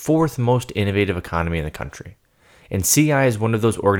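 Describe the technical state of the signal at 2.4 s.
At 2.4 s, clock slip clicks are present, running from 0.11 s to 3.98 s. They come about every 20 ms, forming a soft rattle over the speech. The likely cause is two unsynchronised clocks differing by roughly 1000 ppm, dropping or repeating one sample each time.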